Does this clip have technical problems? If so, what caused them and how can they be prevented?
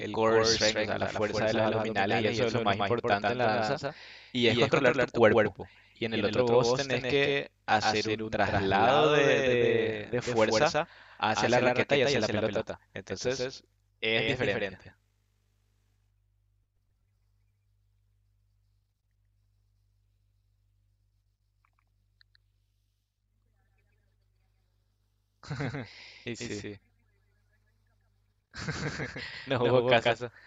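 Yes. A doubled audio track runs through the whole clip. Every sound is followed by a second full-band copy, about 150 ms behind and about 5 dB quieter. The copy has no decay or room colour, so it reads as a clean slapback rather than an echo. The likely cause is the same speech being captured twice, once through a slower path, with both copies mixed together. To prevent it, route each source to the mix only once and mute any monitoring or loopback return.

A corrupt frame was decoded from 0.68 to 0.70 s. It is a short glitch lasting about one compressed frame. Damaged bits made the decoder place energy at the wrong frequencies, and the burst peaks around -15 dBFS. The decoder played the broken frame instead of concealing it. To prevent it, use a transport with error checking and have the decoder drop or conceal frames that fail their checks.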